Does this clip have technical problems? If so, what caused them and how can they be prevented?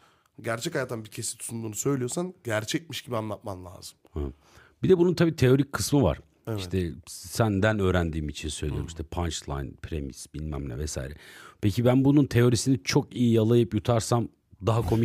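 No, there are no technical problems to be heard in this speech clip. With nothing wrong, there is no cause to trace and nothing that needs preventing.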